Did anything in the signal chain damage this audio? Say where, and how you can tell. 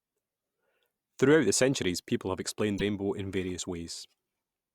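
Yes, at the codec stage: damaged data in the compressed stream, from 2.76 to 2.81 s, right after "the centuries people have" and before "rainbow in various". For about 56 ms the decoder is fed corrupted frame data, misreads it and loses sync until it finds a clean frame header, so the speech gives way to a short glitch. On a spectrogram it shows as a narrow vertical break in the speech; the waveform shows an abrupt discontinuity.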